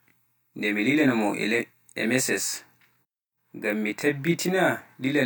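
Throughout the speech, one channel arrives about 20 ms late and the two are summed to mono, producing channel delay (comb filtering). Evenly spaced notches start from around 20 Hz and run up the spectrum, leaving the sound rough and slightly doubled.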